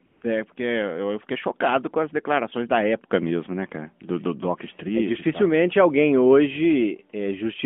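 A speech clip carrying AMR comfort noise from 0.06 to 0.22 s: the sending phone treated the opening as silence and sent no speech frames for about 160 ms, so the receiver substituted a smooth, steady synthetic hiss for the real background. It switches in and out, through a narrowband phone line whose light codec coloration points to the 12.2 kbps AMR-NB mode.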